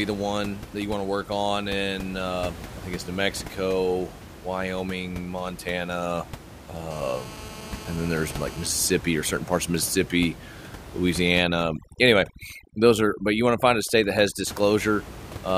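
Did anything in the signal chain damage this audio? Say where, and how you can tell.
Yes. In the analogue wiring, the audio circuit picked up and rectified a nearby 2G phone's radio bursts, producing GSM phone buzz from 6.91 to 8.67 s, ending just before "or certain parts of". It's a steady, raspy, harmonic-rich buzz at about 217 Hz, about 18 dB below the signal.

A noise-reduction stage in the processing chain was set far too aggressively, causing overdone noise removal from 11.42 to 14.47 s. Frequency bands near its noise estimate were gated down, taking quiet speech detail with them, so the background drops and breaks up into twinkling specks. Before this, the room noise sits about 15 dB under the speech.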